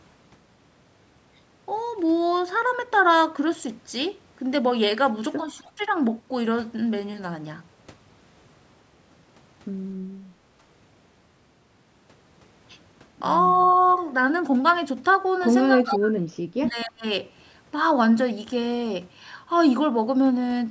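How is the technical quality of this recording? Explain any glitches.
The recording has two linked call-path faults: short bursts of returned echo and moments where the talker is pushed down while the far side is active. The bandwidth tops out at 8 kHz, consistent with standard call microphone processing.

Echo leak appears at 5.55–5.6 s, 13.76–13.95 s and 15.93–15.98 s. Each time a copy of sound returns about 260 ms late, likely because a loudspeaker-side echo canceller let some of its microphone pickup through. The first two scraps sit about 35 dB under the speech. The one near 15.9 s is nearly as loud as the speech. The fixed 260 ms lag separates it from room reverberation, which smears continuously instead of repeating as a distinct copy.

Speech suppressed in double talk occurs at 5.59–5.68 s, 15.81–16.37 s and 16.53–17.05 s. The talker's level collapses by roughly 25 to 35 dB for about a tenth of a second at first, then for about half a second and about 0.4 s. 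The likely cause is the canceller failing to separate the local talker from the loudspeaker echo and ducking both. The dips come while the far side is active, unlike random network dropouts, which ignore what the other side is doing.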